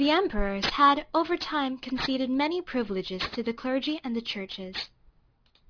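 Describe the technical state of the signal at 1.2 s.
The rate was dropped from 48 kHz to 11 kHz without filtering, so aliasing runs throughout, including 1.2 s: content above 5.5 kHz folds back, leaving sibilants gritty and metallic.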